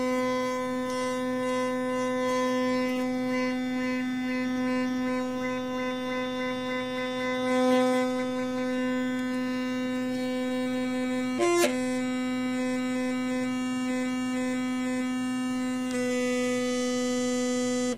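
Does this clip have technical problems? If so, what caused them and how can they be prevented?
No, nothing stood out on listening to this audio, so there is nothing here that needs a cause or a fix.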